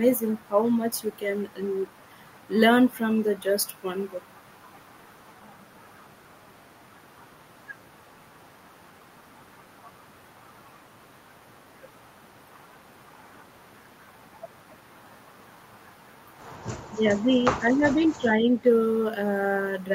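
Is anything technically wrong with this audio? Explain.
Yes. From 16.86 to 17.45 s and 17.61 to 18.58 s the speech dips, by about 15 dB then about 10 dB, likely speech suppressed in double talk, with the echo canceller ducking the talker while the far side also spoke.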